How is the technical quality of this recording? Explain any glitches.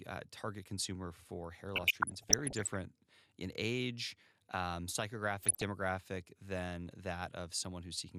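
The recording has two bursts of DAB burbling, both in speech. The first runs from 1.76 to 2.76 s, right after "target consumer for hair". The second is shorter, from 5.41 to 5.62 s, after "in age um". Weak reception let bit errors slip past the error correction into the MP2 audio. Corrupted samples then put short blips of noise in individual sub-bands, and corrupted scale factors make sub-bands leap in level for up to a frame. The result is short noise blips laid over the voice. The second burst sounds denser, which points to a higher error rate there.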